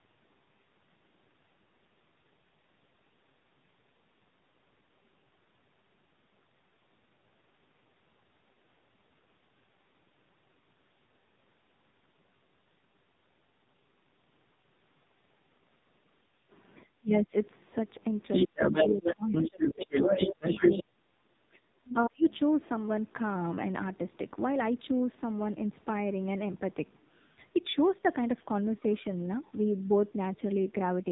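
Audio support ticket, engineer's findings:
AMR narrowband mobile codec, entire clip: the heavy damage points to a low AMR-NB mode, around 5.9 kbps. Nothing above 3.8 kHz, and the speech is buzzy and synthetic.

Speech suppressed in double talk, 16.99–17.34 s: the echo canceller likely lost track during overlapping talk and ducked the near talker. The speech drops by about 30 dB for roughly 0.3 s.

Other side's voice leaking through, 18.32–20.83 s: the loudspeaker echo is likely not fully cancelled. The far voice is audible in the mic path at roughly 5 dB relative to the talker.

Speech suppressed in double talk, 18.46–22.25 s: the same suppressor is likely clamping during double talk. The near speech dips by about 30 dB in pieces, around 2 s in total, overlapping the leak.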